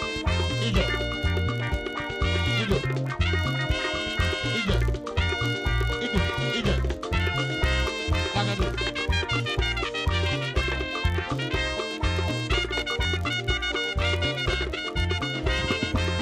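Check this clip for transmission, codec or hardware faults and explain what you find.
There is one fault, and it runs through the whole clip. A filter restarted on every block is at work. The filter drops its memory at each block boundary and starts again from silence. That restart leaves a small transient at the start of every block. The transients repeat at 43.1 Hz, which fits a 1024-sample block. The result is a low, regular buzz under the sound. It grows louder and softer with the signal's level.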